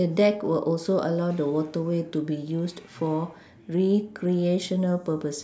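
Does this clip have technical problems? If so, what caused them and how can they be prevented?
No technical faults are audible.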